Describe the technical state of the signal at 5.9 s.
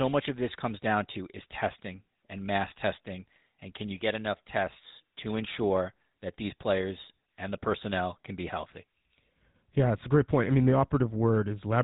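At 5.9 s the speech carries GSM full-rate codec damage, present throughout the clip. The codec models the vocal tract and excites it with sparse regular pulses, giving a plainly audible buzzy, gravelly roughness. A spectrogram shows everything above 3.8 kHz cut away.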